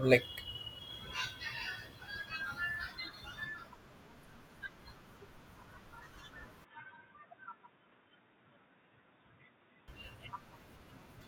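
From 6.64 to 9.88 s the speech turns boxy, quieter and cut off above 3.8 kHz, with a fresh noise floor, likely an input switched to a poorer device rather than simple filtering.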